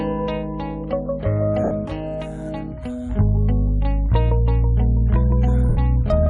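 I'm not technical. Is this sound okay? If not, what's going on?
No. At 1.64 to 1.71 s and again at 5.69 to 5.77 s, the music briefly turns into a soft, hissy smear. These are lost LE Audio frames: short stretches of the wireless Bluetooth signal never arrived, and the player filled each gap of 70 and 80 ms by reusing the last bit of sound with its detail scrambled, fading it down. A plain dropout would go silent or click. Here the gap is covered by a blurry wash instead.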